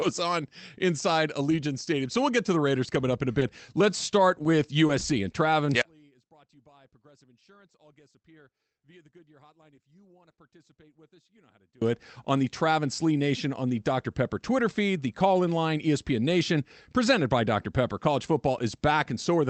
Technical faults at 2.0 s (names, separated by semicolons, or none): none